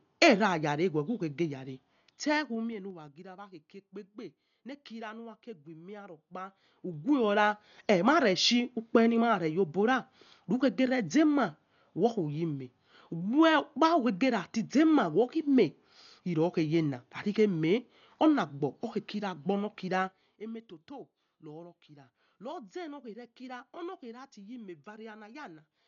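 Dolby Digital compression runs throughout the speech, likely the cause of the heavy damage: nothing sounds above 6.9 kHz, and rough, fluttering dither noise suggests a bitrate near 48 kbps. Zipper noise appears from 1.75 to 3.25 s, where the level drops roughly 15 dB in unsmoothed 2 dB steps, about five per second, each ticking audibly. It returns from 6.11 to 7.38 s as the level climbs roughly 15 dB at about seven steps per second.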